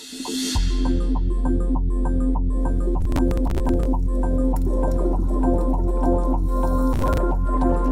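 From 3.01 to 3.85 s, the sound breaks into processor overload crackle. The processor fell behind and missed many buffer deadlines in a row. Each missed slice was skipped, not replayed. That leaves a string of tiny hard-edged gaps, which fits buffers of around 10 ms. Together they sound like gritty tearing over the audio. A shorter burst of the same crackle returns from 6.93 to 7.18 s, then stops as the load eases.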